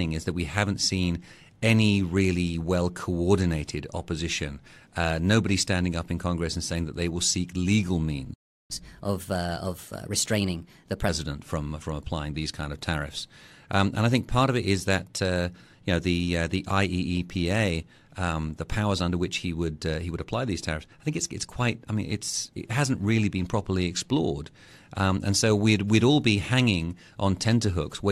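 Right after "seek legal", at 8.33 s, the speech just drops out for about 0.36 s, until 8.71 s. That's a playback stall: the player most likely ran dry of data or had its thread held up, so the output sat silent until it could resume.

From 8.71 s to 11.09 s you get catch-up at higher speed, with the player racing through its backlog at 1.15 times normal rate. Since it's resampling, pitch climbs too, by roughly two semitones, so the talker sounds briefly hurried and higher, settling again by "from from applying these".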